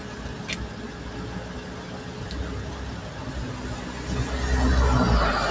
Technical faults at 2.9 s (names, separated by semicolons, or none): noise suppressor applied to music or sounds